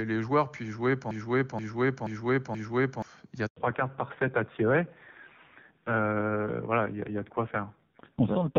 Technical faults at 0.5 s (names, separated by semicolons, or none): none